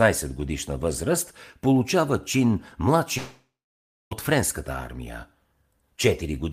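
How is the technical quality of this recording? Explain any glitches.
One clear glitch breaks the speech. From 3.17 to 4.13 s, right after "годишна възраст получава чин", there is a long network dropout. The last sound stretches into a fading buzz or hiss, then about 0.6 s of near-silence follows, and the speech resumes with roughly 0.94 s missing, likely because packets never arrived and the receiver padded the gap. On a waveform this looks like a decaying tail and then a flat line. A spectrogram shows smeared, fading bands and then a blank stretch.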